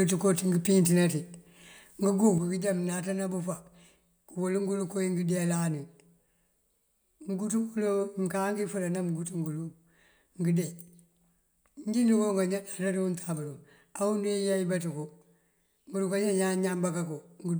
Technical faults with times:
2.38-17.59 one channel drops out

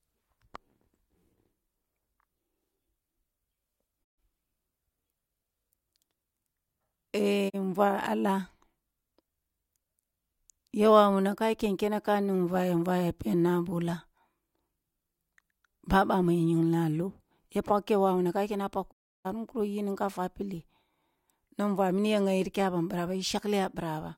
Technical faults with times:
4.03-4.19 digital broadcast dropout
7.48-7.55 digital broadcast dropout
18.91-19.27 digital broadcast dropout

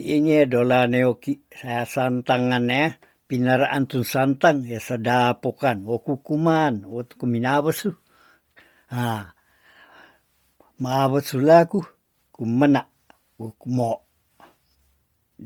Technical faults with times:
0.00-15.46 Bluetooth LC3 compression

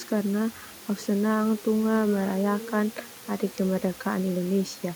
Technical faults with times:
none

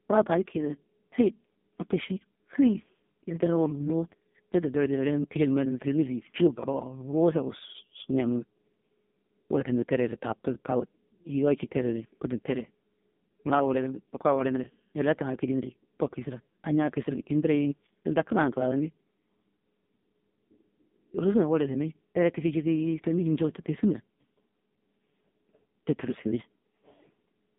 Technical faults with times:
0.00-27.58 AMR narrowband mobile codec

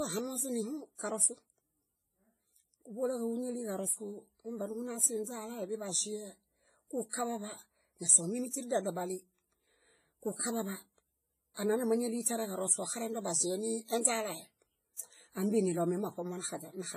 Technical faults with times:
0.00-16.96 WMA compression
7.09-7.13 pre-echo
11.54-11.57 pre-echo
12.22-12.26 pre-echo

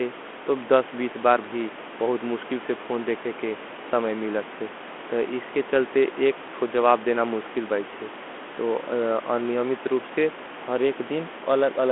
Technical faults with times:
none

